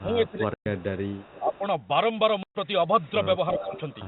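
From 0.0 to 1.05 s the speech dips and thins in pieces, deepest by about 20 dB. This is speech suppressed in double talk, likely an echo canceller turning down its own talker along with the loudspeaker echo. At 0.54 s a 120 ms hole of dead silence opens with hard edges. This is packet loss filled with silence, which fits four 30 ms packets. From 1.07 to 1.59 s a faint copy of the voice trails 335 ms behind, about 25 dB down. This is echo leak, likely from a loudspeaker path the canceller failed to clear. From 1.4 to 1.63 s the speech dips again, by about 10 dB. A second 120 ms silent gap hits at 2.43 s. From 3.01 to 3.11 s the echo returns 387 ms late, very faint, about 35 dB down. The speech ducks about 10 dB between 3.54 and 3.73 s. From 3.56 to 3.97 s the 387 ms echo grows loud, only about 10 dB under the voice. The telephone band tops out at 4 kHz, consistent with G.711 telephone coding.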